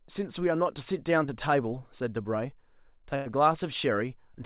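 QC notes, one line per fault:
1.26–1.30 s, short concealed packet loss: about 20 ms of the call didn't reach the decoder in time, so the receiver stretched the previous bit of speech across the gap and blended back in. You get a quick smear or wobble right there.
3.16–3.28 s, burst of packet loss: roughly 100 ms went missing in one go. The receiver kept extending the last sound while fading it down, so it comes out as a short held, dying tail, then speech resumes further on with that chunk gone. Nothing above 4 kHz, which fits a G.711 call leg.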